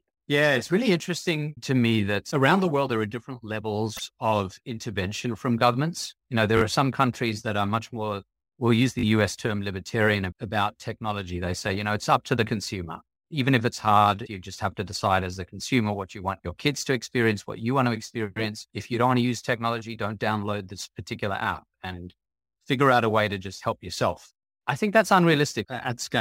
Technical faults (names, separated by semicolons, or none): sample clock jitter; repeated frames; repeated buffer